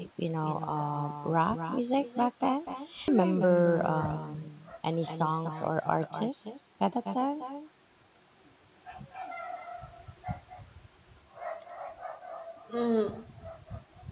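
It's a speech clip over a narrowband call line, with nothing above 4 kHz, which fits G.711-style coding. Throughout, there's echo with no canceller: the far end's loudspeaker is feeding back into its mic, so every phrase returns roughly a third of a second later as a thinner copy about 10 dB down. At 3.08 s there's a skip ahead, where roughly three-quarters of a second of speech just vanishes and the two sides butt together with no gap, as if the jitter buffer dumped a backlog. Right after, the jitter buffer speed-up kicks in twice, from 3.19 to 3.74 s at 109% and from 4.18 to 4.89 s at 112%. It's trimming pitch periods to shed delay, so the talking sounds hurried while the pitch stays put.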